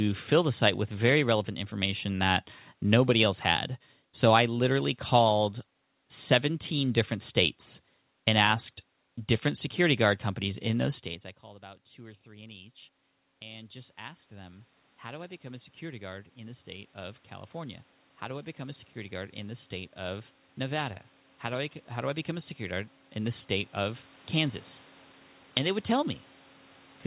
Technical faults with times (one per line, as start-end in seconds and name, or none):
13.48-24.66 automatic gain rising